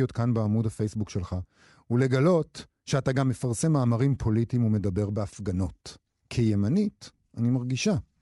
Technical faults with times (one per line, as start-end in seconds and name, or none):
0.00-8.21 Bluetooth LC3 compression